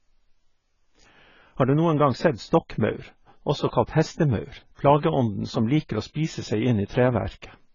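From start to finish, the speech is heavily damaged. Nothing sounds above 7 kHz, so the top of the spectrum is simply gone. The voice is dull and smeared. Sibilants turn fizzy, and sustained sounds take on a warbling texture. This is likely AAC compression. The encoder quantises each frame's frequency lines coarsely and cuts the high bands to save data. The damage points to a very low bitrate.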